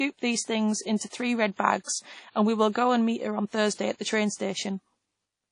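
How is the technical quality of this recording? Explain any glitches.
The speech carries plainly audible codec damage throughout.

From start to end the audio sounds ringing and washy, with a hiss that rises and falls with the signal, and nothing is present above 10.1 kHz. The likely cause is WMA compression. This transform codec spreads quantisation noise across each block, and at a low bitrate, consistent with 32 kbps, it zeroes weak spectral lines.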